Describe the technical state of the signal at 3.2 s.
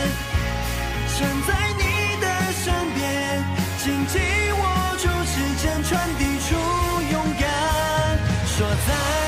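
At 3.2 s the signal is intact, with no dropout, distortion or other audible fault at that moment.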